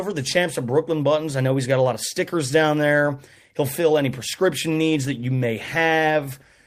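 At 4.7 s a call bitrate drop sets in and lasts to the end of the clip: the bandwidth estimate fell, so the encoder was given far fewer bits and coded the speech more coarsely, leaving it rougher and more watery. This fits a fall from 32 kbps to about 18 kbps, with the lowest rate holding for roughly 1.2 s.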